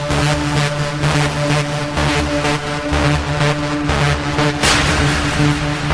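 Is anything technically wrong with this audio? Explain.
No, nothing technically wrong can be heard in this audio. The recording comes across as intact, with no faults to point to at any moment.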